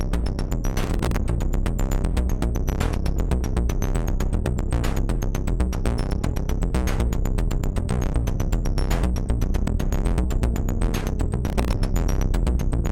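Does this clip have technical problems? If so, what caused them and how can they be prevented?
Yes, processor overload crackle at 0.8 to 1.16 s and 11.48 to 11.73 s. Many very short buffers missed their deadlines in a row, each replaying old audio with hard edges. Unlike a single dropout, it is a dense gritty burst that clears when the load drops. Prevent it with larger buffers or less processing load.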